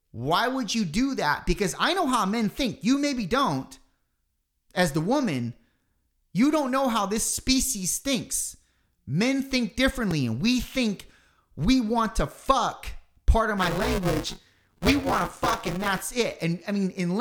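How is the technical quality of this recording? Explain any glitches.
The speech recording has three glitches: two brief clicks from a repeated buffer and a longer stretch of buffer tearing near the end.

At 4.01 s and 10.11 s there is a tiny click or buzz from a repeated buffer. A 2.67 ms chunk, which fits a 128-sample buffer, replays once and then twice when new audio arrives late.

From 13.57 to 16.04 s there is a robotic 188 Hz rattle from buffer tearing. Writer and reader cross inside each 256-sample period, leaving about a third of each buffer holding audio roughly ten milliseconds old.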